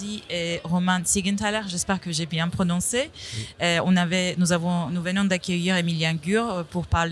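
Nothing stood out as a technical fault anywhere in the recording on listening.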